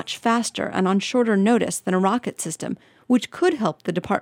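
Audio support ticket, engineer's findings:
No faults found on listening; the signal holds steady throughout, with no dropouts, discontinuities or level anomalies to attribute to any component.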